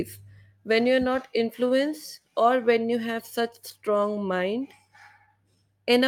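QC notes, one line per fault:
throughout: clock drift between sender and receiver. The sender's clock runs about 3% slow relative to the receiver's, so audio arrives slightly more slowly than it is played out. The jitter buffer keeps draining, and the receiver has to pad the stream to avoid running dry. This gives a persistent, slightly dragging timing across the whole speech clip, with small hiccups at irregular points rather than a steady, even slowdown.
0.18 to 5.92 s: repeated timing corrections. To keep pace with the slow sender, the receiver repeats short pieces of audio at uneven intervals, all in the same direction. Together they add roughly 150 ms of material and bring the effective rate to 97% over this span. Each insertion is small, so it sounds like a faint stutter or a slightly unsteady tempo rather than a distinct glitch.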